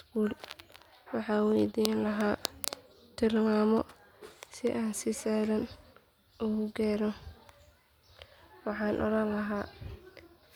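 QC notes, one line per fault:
No faults heard on the speech clip, nothing to log.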